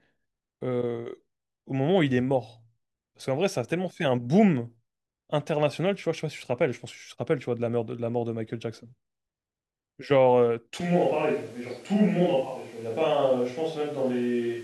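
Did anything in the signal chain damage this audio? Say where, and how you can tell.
Yes. At 10.81 s the speech abruptly turns roomy and hollow, with thinner bass, and stays that way to the end. The level barely moves, but a room-noise bed appears, roughly 30 dB below the speech. This points to the capture stage. The likely cause is a switch to a distant microphone, with the close mic's feed dropped and a far pickup taking over. Distance adds room reflections and loses low-end proximity effect.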